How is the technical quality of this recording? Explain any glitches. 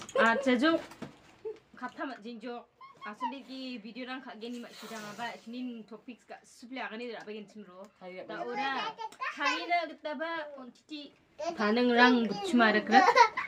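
Listening through, nothing in the recording stood out as a glitch or technical problem.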